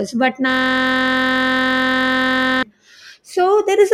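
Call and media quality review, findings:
System hang loop, 0.50–2.63 s. Host or audio driver stalled while the output hardware kept replaying its ring buffer. Speech replaced by one 23.22 ms slice repeating about 90 times at 43.1 Hz. Steady buzz, which fits a 1024-sample buffer.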